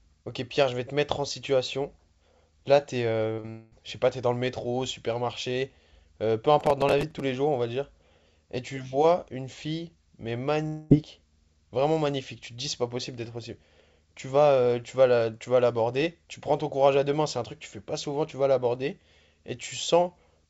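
Around 3.34 s there are two back-to-back short concealed packet losses, 3.34–3.40 and 3.40–3.46 s, each about 40 ms where the decoder got nothing and stretched the previous sound, so you hear a quick smear. Right after, 3.50–3.73 s, the sound turns into a fading buzzy continuation with no real audio, likely a long network dropout. The same thing happens at 10.67–10.92 s.

Between 6.61 and 7.20 s there's processor overload crackle. Roughly fifteen short buffers of around 5 ms each missed their deadline and replayed stale audio, giving a gritty tearing over the sound.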